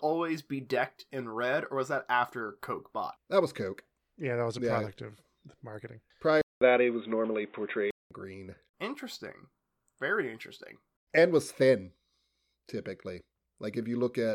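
At 6.41 s the speech drops out for 200 ms, then returns boxy, with nothing above 3.8 kHz, a level shift of about 5 dB and faint new background noise, until 8.11 s. The gap and new noise floor, not merely lost treble, point likely to an input switched to a poorer device.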